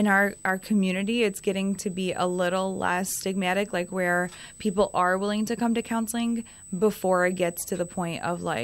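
Throughout the speech runs a USB whine, a steady tone fixed at 8 kHz and roughly 20 dB below the voice. Current drawn in 125-microsecond microframes leaks through power or ground. Unlike mains hum, it sits high and never drifts in pitch.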